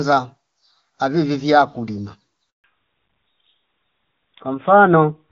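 Handover gap at 2.50 to 2.64 s: the speech fades out within a few tens of milliseconds and leaves 140 ms of silence while the call switches networks.

Fallback to narrowband from 2.64 s to the end: the HD Voice sound, which fits AMR-WB at its top rate, gives way to what suggests AMR-NB. Nothing above 4 kHz remains, so the speech turns duller and rougher.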